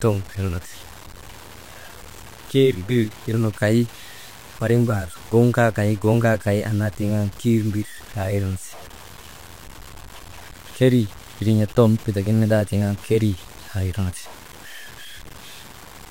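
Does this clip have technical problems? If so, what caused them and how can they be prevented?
Yes. Low bit depth without dither runs through the whole speech clip. The grain rides on the signal itself, turning quiet passages rough and making the softest syllable tails crackle or drop out as the level falls between steps. The likely cause is samples cut down to very few bits by truncation rather than rounding with dither, which fits about 7 bits and leaves distortion only some 25 dB below the speech. To prevent it, keep full resolution throughout and add dither at any bit-depth reduction.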